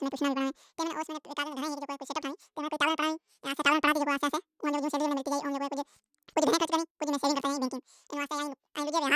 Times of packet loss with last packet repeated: none

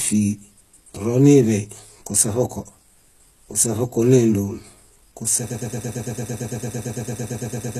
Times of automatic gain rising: none

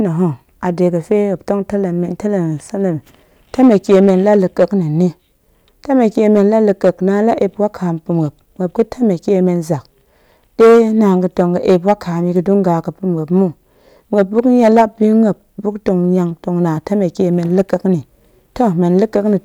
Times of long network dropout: none

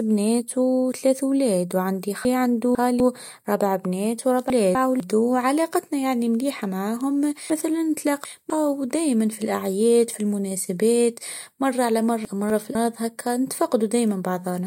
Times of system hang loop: none

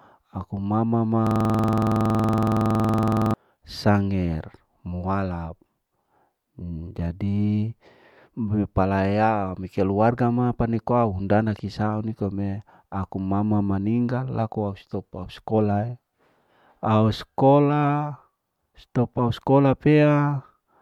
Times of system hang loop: 1.27-3.34

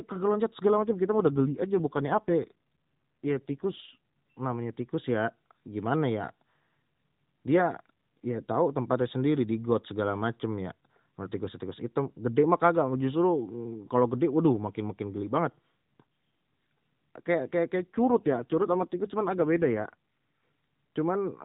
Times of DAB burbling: none

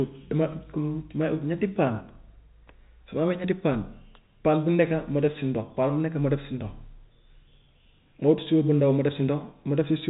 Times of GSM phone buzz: none

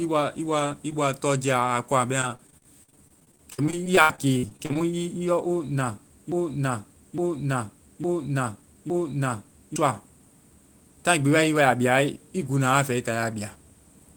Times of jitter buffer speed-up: none

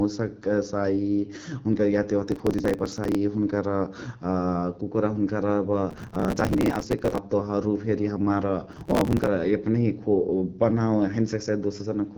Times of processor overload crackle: 2.28-3.15, 5.91-7.18, 8.72-9.27

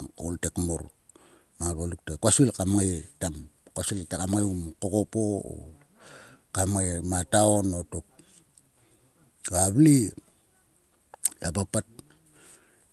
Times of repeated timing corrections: 0.12-12.62

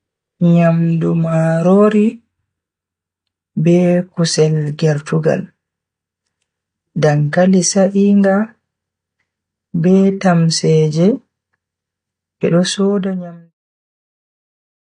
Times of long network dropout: none

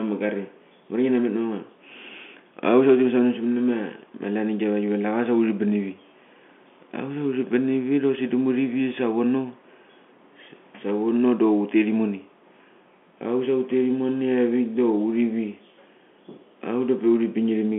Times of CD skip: none

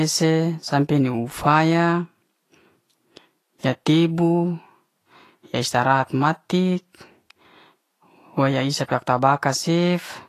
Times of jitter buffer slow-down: none

